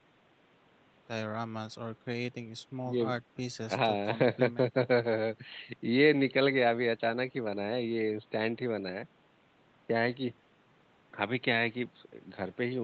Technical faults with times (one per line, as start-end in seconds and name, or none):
none